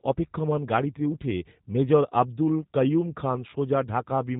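G.729 codec damage runs throughout the clip. The speech is resynthesised from a vocal tract model, pitch prediction and sparse pulses, with nothing above 4 kHz, which fits G.729A at 8 kbit/s. The result sounds plainly rough and synthetic.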